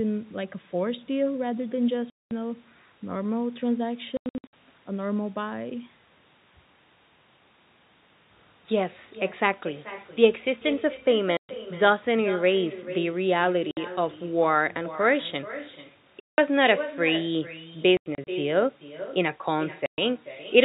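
Speech over a telephone-band link, with everything audible sitting below 4 kHz, carries echo with no canceller throughout: a copy about 15 dB quieter trails each phrase by roughly 400 ms, visible on a spectrogram as faint duplicated formant patterns shifted right. Packet loss filled with silence punches hard-edged gaps, which appear as flat blank columns in the waveform, at 2.1–2.31, 4.17–4.53 (scattered), 11.37–11.49, 13.71–13.77, 16.21–16.38, 17.97–18.27 (scattered) and 19.86–19.98 s. The gap lengths fit 30 ms packets.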